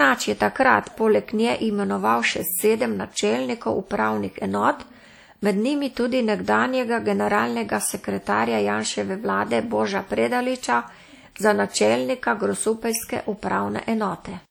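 Throughout the speech, a ringing, washy quality and a hiss that swells and fades with the voice point to WMA compression, likely at a low rate around 48 kbps. Long transform blocks smear quantisation noise around each syllable. A spectrogram shows speckled gaps where weak components vanish, with content reaching 20.1 kHz.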